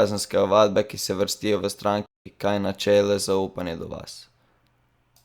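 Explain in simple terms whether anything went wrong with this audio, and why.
At 2.06 s the speech drops out abruptly and stays silent until 2.26 s, a gap of about 0.2 seconds, before continuing as if nothing happened. This is a digital broadcast dropout. The receiver stopped getting usable data for that moment, either because the signal was lost or because the incoming blocks arrived damaged, so it muted the output until good data returned. Whatever was said during that fifth of a second is gone.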